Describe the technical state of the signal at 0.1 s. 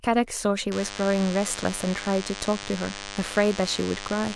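At 0.1 s the speech signal is intact, with no audible technical fault at that moment.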